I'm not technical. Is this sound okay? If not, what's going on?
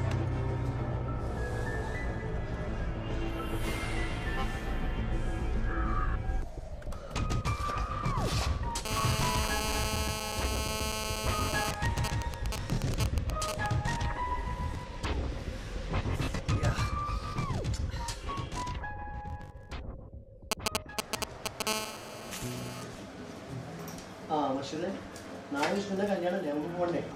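No, there's interference from a mobile phone sitting close to the recording gear. Two kinds of it turn up.

The first is GSM phone buzz, from 8.85 to 11.71 seconds and again from 21.67 to 22.83 seconds. An older 2G phone on a call sends radio pulses about 217 times a second, and the audio circuitry turns those pulses into sound. You hear a harsh, raspy buzz with nothing to do with the recording itself. It's nearly as loud as the main sound the first time and a bit quieter the second.

The second is GSM signalling bursts, from 11.74 to 13.66 seconds and from 20.52 to 21.62 seconds. Here the phone only sends short groups of pulses. In the first stretch it's still on the call while the person on it is silent, and in the second it's just signalling, not on a call. That comes through as even ticks with a longer buzz twice a second in the first stretch and a galloping dit-dit-dit of short buzzes in the second, about as loud as the main sound and even a little louder in the later stretch.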